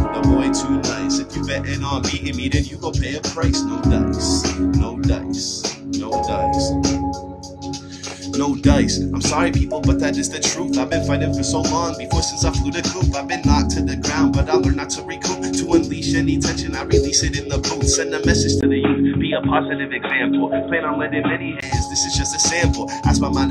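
The audio has one fault. From 18.61 to 21.62 s, it turns dull and boxy. Nothing above 3.8 kHz gets through. A brief silence marks the switch, and a faint new noise floor appears. The level barely changes. The likely cause is the input switched to a poorer device.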